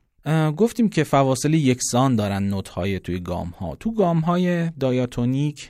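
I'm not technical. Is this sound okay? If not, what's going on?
Yes, nothing in this recording stood out as a problem when listening to it.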